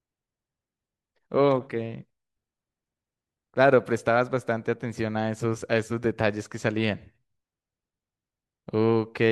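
Listening to the speech recording turned up nothing that stood out.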